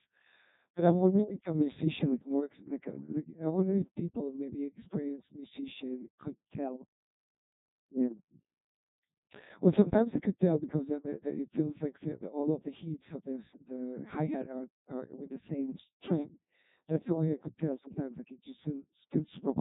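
Codec 2 vocoder damage runs through the whole of this speech clip. It sounds robotic and buzzy because the decoder has rebuilt the voice from sine waves driven by pitch, voicing, energy and a coarse spectral envelope, not from the original waveform. The damage is heavy, which fits a very low rate of around 1.2 kbit/s, and nothing remains above 3.8 kHz, leaving the sound dull and synthetic.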